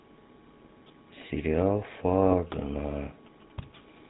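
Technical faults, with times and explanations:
Throughout, GSM full-rate codec: the speech has been squeezed through the original GSM coder, which rebuilds each frame from a vocal-tract filter excited by evenly spaced pulses, keeping only one excitation sample in three. That coarse excitation gives the speech a plainly audible buzzy, gravelly grain, and nothing survives above 4 kHz, so sibilants and upper harmonics are cut off, a sound that fits the 13 kbps full-rate mode.
2.00 to 3.99 s, GSM signalling bursts: a nearby 2G handset is transmitting short groups of radio bursts while signalling, and the audio circuitry rectifies that RF into the signal path. The result is a galloping dit-dit-dit of short buzzes with a 217 Hz repetition underneath the speech. It stays faint, about 30 dB below the speech, and continues for the full two seconds.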